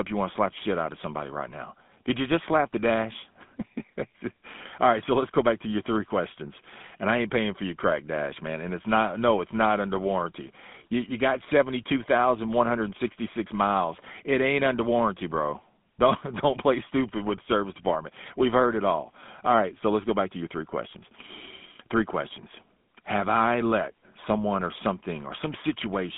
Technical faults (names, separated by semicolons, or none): GSM full-rate codec